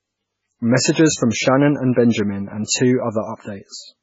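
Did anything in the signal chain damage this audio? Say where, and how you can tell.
Yes, at the codec stage. Throughout the speech there is nothing above 7.6 kHz, and the remaining sound is heavily watery and swirly, with metallic chirps on s sounds and smeared onsets. This is likely MP3 compression at a very low rate, roughly what a 16 kbps encode sounds like. Short of bits, the encoder cut the treble flat and zeroed weak frequency lines that flicker between frames. A spectrogram shows a hard ceiling at 7.6 kHz and speckled, patchy gaps below it.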